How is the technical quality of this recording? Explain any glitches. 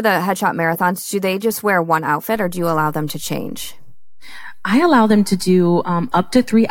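There is one clear glitch in this speech recording. At 2.36 s, just after "they just wear one", a low thump is heard while the speech carries on unchanged. This is a DC step: the waveform's zero line jumps by about -30 dBFS and stays offset for the remaining 4.35 s to the end. The sudden shift in baseline, rather than anything in the speech itself, produces the thump.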